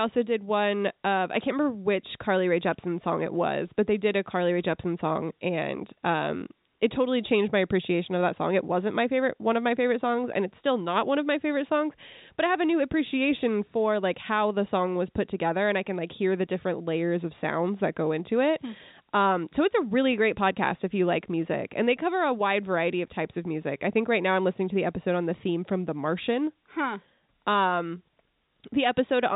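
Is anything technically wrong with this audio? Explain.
No technical faults detected.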